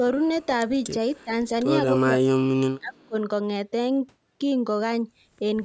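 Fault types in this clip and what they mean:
Echo leak: A faint delayed copy of the voice, roughly 284 ms late and very quiet, slips through at 1.2 s and again at about 3.0 s; it is likely loudspeaker pickup the far end's echo canceller missed. On a spectrogram, a weak smeared repeat of earlier harmonics.
Speech suppressed in double talk: The voice dips briefly at about 1.24 s, then sinks deeply, around 30 dB, for roughly a second from 2.04 to 3.15 s, likely the echo canceller turning the voice down while both sides talked. The waveform shows a sudden collapsed envelope.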